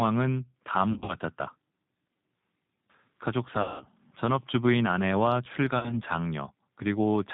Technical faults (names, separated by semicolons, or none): G.729 codec; VoIP packet loss concealed by the speech codec